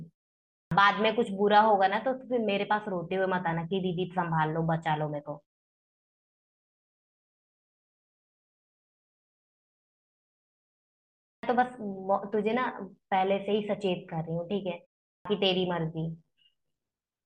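At 0.57 s the speech begins with a clipped start after a pause. About 140 ms of the opening sound is missing. The playback device has gone idle during the silence and needs time to wake. Speech snaps in abruptly, without its first sounds. It happens again at 11.26 s, after a pause of nearly 6 s, losing about 170 ms. At 15.1 s it recurs after only 0.32 s of silence, losing about 150 ms.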